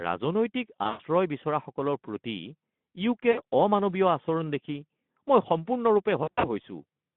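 Speech over a narrowband Speex call line with VoIP packet loss concealed by the speech codec at 0.84–1.01 s (before "বিচৰাসকলৰ প্ৰতি"), 3.31–3.41 s and 6.23–6.47 s: rather than silent dropouts, the gaps fill with fading extrapolated sound, a buzzy tone or coloured noise, and the voice stays weak or distorted for a while after packets resume.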